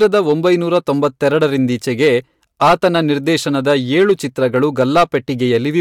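Hard clipping runs through the whole speech clip. The level is pushed about 9 dB past what the signal path can pass. The peaks are sliced flat at that ceiling. Only around two percent of the samples hit it, so the damage sits on the loudest moments. Those flat tops add harmonics high up the spectrum. The result is a brittle crackle on the loudest peaks.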